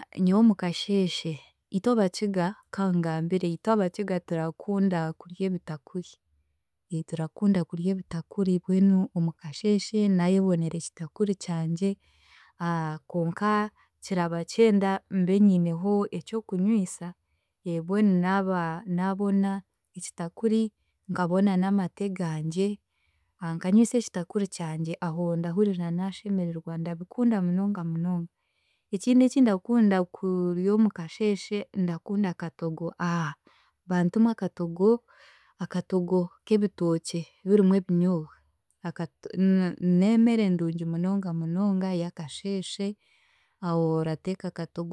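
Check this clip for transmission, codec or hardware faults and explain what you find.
Nothing stood out on listening to this speech clip.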